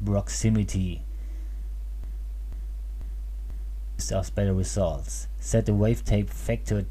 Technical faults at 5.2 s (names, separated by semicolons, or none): none